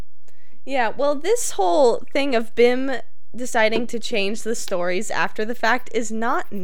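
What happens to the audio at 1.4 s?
At 1.4 s the speech sits on a DC offset that runs through the whole clip, not an event starting there. The entire waveform is displaced from zero by a constant of about -21 dBFS, so it is not audible as a sound of its own; it eats into headroom and appears as fixed energy at 0 Hz. Unlike mains hum or rumble, it has no pitch, no fluctuation and no harmonics.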